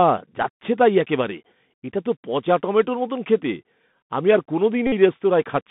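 A Bluetooth CVSD headset codec colours the whole clip. The speech is confined to roughly 150 Hz to 3.6 kHz, which fits a 64 kbps CVSD link. Its one-bit delta coding cannot keep up with loud, sharp sounds, so s sounds come out scratchy over a grainy hiss.

A Bluetooth headset packet repeat occurs from 4.87 to 4.92 s. Lost voice packets were replaced by decoding the previous packet again and again for about 53 ms. Repeating every 3.75 ms, this produces a short, steady buzz near 267 Hz.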